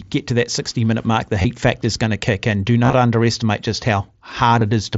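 Speech over a wideband mSBC headset link, with brief concealed Bluetooth headset packet loss at 1.42–1.45 s before "factor is going to", 2.84–2.93 s before "underestimate just" (about 52 ms lost in scattered short gaps), and 4.60 s. At each point the receiver patched the missing audio by repeating a recent waveform stretch. On a waveform this shows as short, evenly repeating cycles. On a spectrogram it appears as briefly frozen, smeared harmonics.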